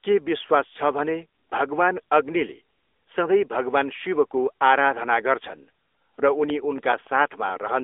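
AMR narrowband mobile codec, throughout: the speech passes through a low-rate mobile coder that rebuilds each 20 ms frame from a vocal-tract model excited by a few pulses. Nothing above 3.7 kHz survives, the band sits roughly 300 Hz to 3.6 kHz, and the plainly audible buzzy, synthetic texture fits a 10.2 kbps mode.

CD scratch ticks, 6.50 to 7.49 s: a disc blemish wipes out more data than error correction can rebuild on each rotation, so the player patches or mutes the damaged samples. That produces a regular train of eight brief ticks, about eight per second, each only a few milliseconds long.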